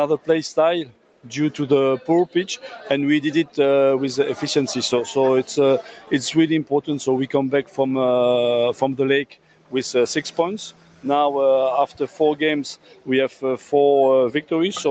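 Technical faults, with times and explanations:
Throughout: noise suppressor applied to music or sounds. A suppressor built for speech treats held tones and decaying tails as noise, so the level swings by about 10 dB and the sound pumps and thins. On a spectrogram, sustained bands fade in patches while attacks stay bright.
0.85–1.27 s, 5.82–6.11 s, 9.26–9.73 s, 10.71–11.05 s, 11.9–12.2 s and 12.76–13.08 s: sound cut by the noise suppressor. Each time, a steady or fading stretch is pushed down by about 8 to 12 dB. The waveform envelope dips, and the spectrogram darkens across the band.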